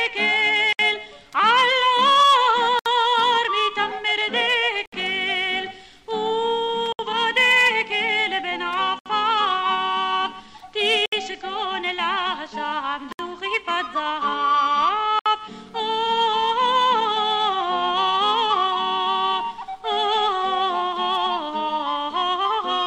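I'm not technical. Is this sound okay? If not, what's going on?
No. The sound drops out briefly at 0.73, 2.79, 4.86, 6.93, 8.99, 11.06, 13.12 and 15.19 seconds. This is a gap at a join of encoded pieces. Short sections were saved separately and stuck together untrimmed, leaving about 65 milliseconds of silence at each join.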